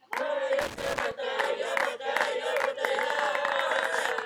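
From 0.61 to 1.12 s, an irregular burst of scratchy crackle cuts through the sound. This is loose connector crackle: a worn or dirty contact repeatedly breaks and remakes the connection, chopping the signal for about half a second.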